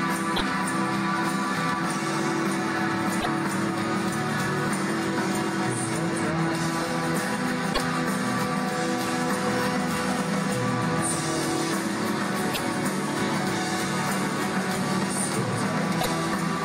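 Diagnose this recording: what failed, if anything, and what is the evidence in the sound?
Short glitches with a jump ahead at 0.35, 3.20, 7.72, 12.53 and 16.00 s, each about 64 to 70 ms; codec stage, likely a broken MP3 bit reservoir after frames of 26.1 ms were lost.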